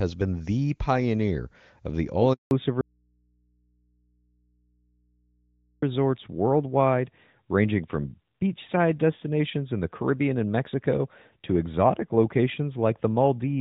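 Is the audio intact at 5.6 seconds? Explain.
No. From 2.81 to 5.82 s an audio dropout to a faint residue leaves only mains hum about 45 dB below the signal. The likely cause is a lost signal on a live input, which shows as a near-flat waveform and a thin low hum line. Since 2.51 s a fallback to narrowband, from HD Voice to an older codec, has also removed everything above 4 kHz, so the spectrogram is empty above that line.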